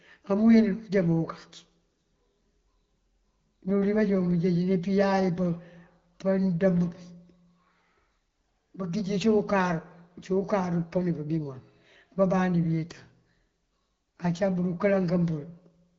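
Nothing here sounds wrong: the speech comes over the AMR wideband (HD Voice) codec at 12.65 kbit/s, with the band topping out around 7.1 kHz as that codec's audio does.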